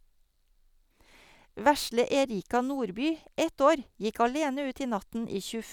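There are no technical faults to describe in time order.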